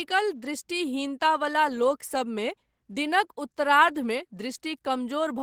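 Nothing stood out on listening to this recording of speech.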